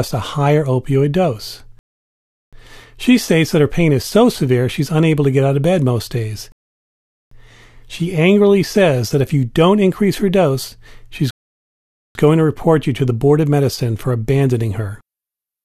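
At 1.79, 6.52 and 11.31 s the speech stops dead in a rebuffering stall. The player ran dry, waited about 0.7 to 0.8 s for data, then resumed exactly where it left off.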